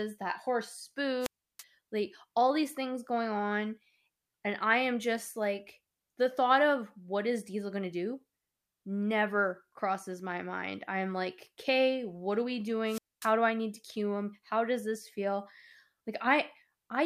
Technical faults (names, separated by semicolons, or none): wireless microphone squelch dropout